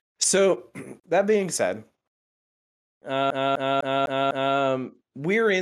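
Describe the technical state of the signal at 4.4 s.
At 4.4 s the speech is caught in a CD stuck on one turn, running from 3.30 to 4.56 s. A scratch keeps knocking the laser back one track, so the same 0.25 s slice of speech replays five times, each pass split by a brief mute at the jump. Unlike a buffer-underrun glitch, with its uneven gaps and dropouts, this stutter repeats identical material at a steady, even rate.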